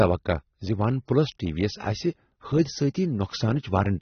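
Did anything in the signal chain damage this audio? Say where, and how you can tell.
Yes. The damage happened at the codec stage and runs through the whole clip. The speech sounds dull and smeared, with a warbling, fizzy texture on sustained sounds and sibilants. A spectrogram shows a hard ceiling at about 6.3 kHz with nothing above it. That points to likely AAC compression at a low bitrate, roughly 27 kbps, where the encoder cuts off the top band and sparsely quantises the rest.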